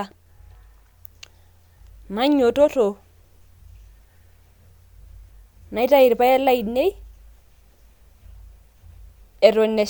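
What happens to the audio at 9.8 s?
Nothing goes wrong at 9.8 s; the speech runs on intact through that moment with no dropout, click or other fault.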